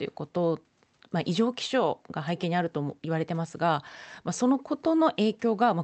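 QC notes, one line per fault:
No fault to note for this speech clip.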